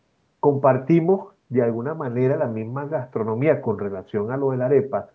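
Nothing stood out on listening to this speech, which carries the expected bandwidth of call microphone processing with no content above 8 kHz.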